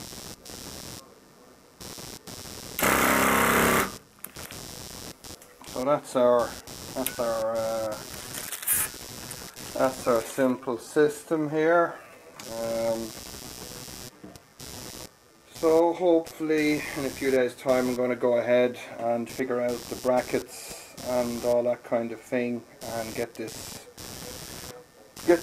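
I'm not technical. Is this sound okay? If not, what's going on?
No. Two things are wrong.

Throughout the clip there is computer activity noise: a buzzing that pulses roughly 150 times a second and sits well below the main sound. It comes from the computer itself. When the processor, graphics card or mouse work harder, the electrical ground that the audio circuit shares with them shifts, and that shows up as buzz. It rises and falls with what the computer is doing, not with the sound.

From 7.45 to 16.85 seconds there is a time-stretched section. Here the sound suddenly plays at about 0.71 of its normal pace, so it drags, yet the pitch does not drop the way a slowed tape would. That combination likely comes from software stretching this part to fill a longer time. It keeps the pitch steady by repeating short slices of the audio.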